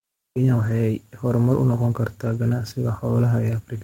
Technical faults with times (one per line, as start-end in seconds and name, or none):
0.00-3.83 sample clock jitter
0.61-0.71 lost packet rebuilt from error correction
2.25-2.35 lost packet rebuilt from error correction